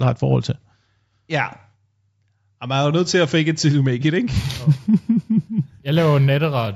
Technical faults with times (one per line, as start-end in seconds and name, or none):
4.37-6.71 imaging from linear upsampling